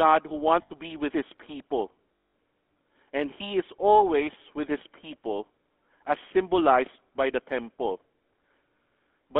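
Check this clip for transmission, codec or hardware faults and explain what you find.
Yes, there are two problems. The whole clip is coloured by GSM full-rate coding, and there are two short dropouts where GSM frames were lost.

GSM full-rate codec: This runs throughout the clip, and the damage is plainly audible. The speech has that buzzy, gravelly roughness you get when the coder rebuilds the vocal tract from a coarse pulse train, which fits the 13 kbps full-rate codec. The line is band-limited to roughly 250 Hz to 3.5 kHz, so the voice sounds thin, with no low body and no top-end air.

Lost GSM frames: The first dropout runs from 0.62 to 0.71 s, about 80 ms, just before "to be with his". The second runs from 2.14 to 2.34 s, about 200 ms, right after "be with his people". These lengths fit about four and ten lost frames. In each gap the decoder keeps repeating the last good frame. That gives a held, metallic ring instead of a clean gap.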